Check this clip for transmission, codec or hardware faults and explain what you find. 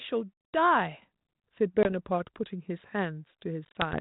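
Three faults are audible in this speech clip: one step in microphone volume and two bursts of packet loss on an ADPCM call, over audio whose light coding noise and missing top above 4 kHz fit G.726 at 32 kbit/s.

At 1.02 s the microphone volume stepped up. The call software judged the input too quiet and raised the device's gain by about 6 dB in one move, so the speech and the background noise jump louder together, abruptly.

At 1.83 to 1.90 s there is packet loss on the ADPCM call. A couple of packets, 20 ms of audio, were dropped and filled with silence. The decoder's adaptive predictor and step size then no longer matched the sender's. The result is a sharp-edged gap, after which the speech comes back slightly distorted, settling within tens of milliseconds.

From 3.65 to 3.98 s a second, heavier burst of the same fault drops about seven packets. That is 70 ms of audio scattered over 100 ms, with the longest run 30 ms. 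It breaks the speech into several short holes, each followed by the same brief mistracking distortion.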